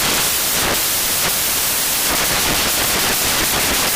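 Samples built from the wrong bytes affect the audio from the start to the end. Each sample has been assembled with its bytes misread, either shifted by one position or taken in the wrong order, so the low-order bits, which change rapidly, now dominate every value. The result is a dense wash of loud, harsh broadband noise across the whole clip, close to white on the loud sounds.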